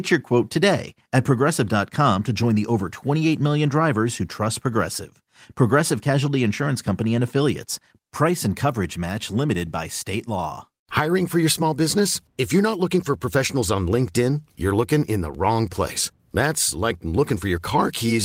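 No technical faults are audible.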